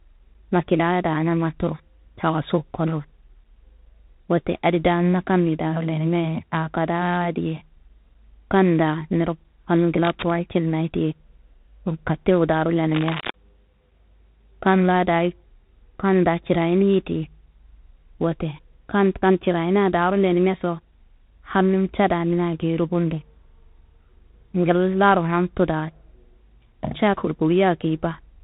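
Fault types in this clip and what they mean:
tandem speech coding: The speech has passed through more than one speech coder in a row, with a CVSD stage and then G.726 at 32 kbit/s and a G.711 mu-law link carried between them. Each coder re-encodes whatever damage the one before left behind, so the result sounds rougher, and it's muffled too, with nothing above 3.8 kHz. You hear it all the way through the clip.
cable scratch noise: There are two short bursts of dense, uneven scratching over the speech, from 10.05 to 10.31 s, just before "ye geyi", and again from 12.95 to 13.30 s. Both sit only about 10 dB below the speech. The likely cause is a worn cable, connector or control being moved, which makes its contact resistance jump around for a moment.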